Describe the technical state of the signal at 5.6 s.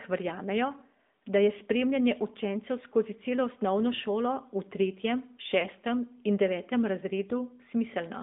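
A brief dip and warble from 5.60 to 5.67 s, right after "osnovno šolo v tretjem", consistent with one lost AMR speech frame, about 20 ms, concealed by reusing the last pitch and tract settings. Throughout, the sound is buzzy, synthetic and confined to 200 Hz–3.6 kHz. That is plainly audible AMR narrowband mobile codec damage, which fits a mode near 10.2 kbps.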